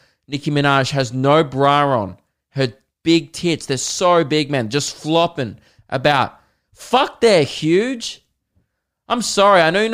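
Nothing in the speech recording stood out as a technical problem on listening.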